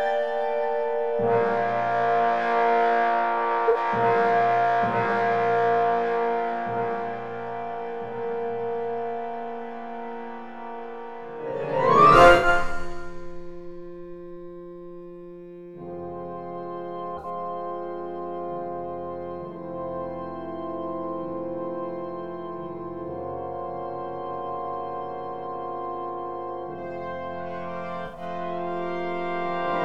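Short soft-edged holes open in the sound at 3.68 to 3.77 s, 12.36 to 12.47 s, 17.17 to 17.25 s and 28.06 to 28.21 s, each a muted or smeared patch of roughly 0.08 to 0.16 s. This is corrupt frame concealment: a handful of damaged AAC frames were detected by the decoder, which muted them or filled in a scrambled copy of the last good spectrum.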